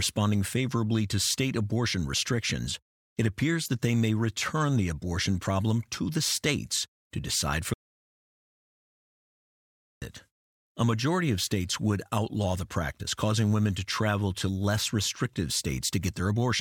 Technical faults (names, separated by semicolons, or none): audio dropout to silence